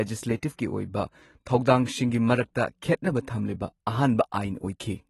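AAC compression runs through the whole recording, and the damage is plainly audible. Nothing sounds above 12 kHz, so the speech loses its air and sibilants turn dull and smeared, with a fizzy, warbling edge on sustained sounds. The likely cause is an AAC-LC encode that quantised each frame's spectrum coarsely against its hearing model, discarding the top band and thinning detail below it, which fits a low bitrate around 32 kbps.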